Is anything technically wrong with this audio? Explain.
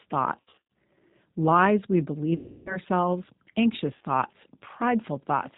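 Yes. The speech has passed through a low-bitrate voice codec and suffers several dropouts.

The G.729 codec damage runs throughout and is plainly audible. The codec sounds like G.729A at 8 kbit/s. It models the voice with a vocal tract filter, a pitch predictor and a few pulses per short frame, and it discards everything above 4 kHz. The result is dull, band-limited speech with a rough, slightly synthetic edge.

There is also VoIP packet loss concealed by the speech codec. The first burst runs from about 0.40 to 0.68 s, with losses scattered across roughly 300 ms and no gap longer than 40 ms. It sounds like a stutter of buzzy or noisy fragments. The second, from 2.36 to 2.78 s, is about 300 ms of loss. There the decoder repeats its last pitch and filter, so the speech smears into a fading buzz or coloured noise. The third, from 3.95 to 4.05 s, is a brief 60 ms blur. After each gap the voice stays weak or distorted a little longer while the decoder recovers.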